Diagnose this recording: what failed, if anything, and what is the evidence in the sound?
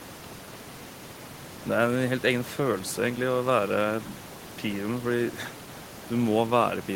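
Nothing stood out on listening to this speech recording, apart from the room's own background noise sitting about 17 dB below the voice.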